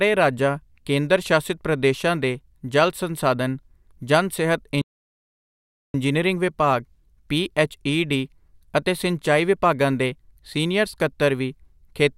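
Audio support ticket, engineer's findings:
Playback stall, 4.82–5.94 s: speech drops to silence for 1.12 s after "ਜਲ ਸੰਸਾਧਨ ਜਨ ਸਿਹਤ", picks up at "ਵਿਭਾਗ ਪੀਐੱਚਈਡੀ ਅਤੇ ਸਿੰਚਾਈ". Player likely starved of data or its thread got blocked.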